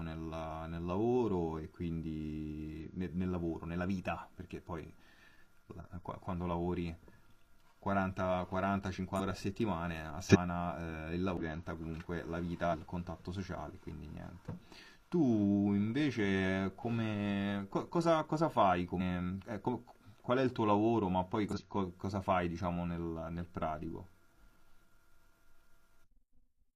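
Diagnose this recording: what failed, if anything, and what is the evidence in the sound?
Corrupt frame decoded at 2.78 to 2.84 s, a short chirp-like blip in the speech lasting about two codec frames and fairly quiet, peaking around -40 dBFS. The fault sits at the codec stage. Damaged bits inside the compressed frames were not caught, so the decoder reconstructed them with wrong gains or misread spectral codes. That places energy at frequencies the speech never had, for roughly the span of those frames.

Compressed frames skipped at 9.15, 10.26, 11.37, 12.69, 18.97 and 21.48 s. Each point is a join where the speech lurches forward, losing around 150 ms at most of these points and about 300 ms at 10.26 and 11.37 s. Whole frames went missing in storage or were rejected by the decoder. The jump is therefore a multiple of the frame length.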